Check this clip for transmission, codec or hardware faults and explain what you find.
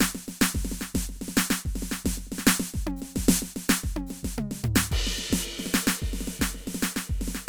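Nothing in the music points to a transmission, codec or hardware problem; the signal stays continuous throughout.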